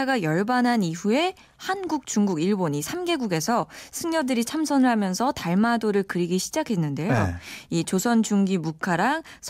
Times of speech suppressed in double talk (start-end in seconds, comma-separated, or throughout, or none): none